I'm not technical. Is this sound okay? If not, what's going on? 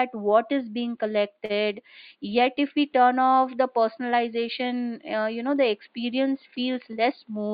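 No, there are two small glitches in this speech.

At about 1.45 to 1.52 s there's a short stall from a late packet. A chunk of audio showed up late, so the receiver kept stretching the last sound for about 42 milliseconds until it arrived, then carried on where it left off. Nothing is lost, but one sound hangs on a touch too long and might have a faint buzz or wobble.

Near the end, from about 6.82 to 7.26 s, there's a jitter buffer speed-up. The system had stored up more audio than it wanted, so it trimmed lots of tiny slivers in a row, a bit under a tenth of a second in total. That stretch plays about 12% faster at the same pitch, so it sounds rushed. The quiet room noise in the background is just part of the recording.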